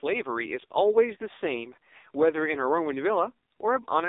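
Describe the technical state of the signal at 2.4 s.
At 2.4 s the speech is still passing through the AMR narrowband mobile codec that affects the whole clip, squeezed into a 300 Hz to 3.7 kHz line band and rebuilt from a sparse vocal-tract model. Nothing above 3.7 kHz survives, and the heavy buzzy, synthetic texture fits a very low rate near 5.9 kbps.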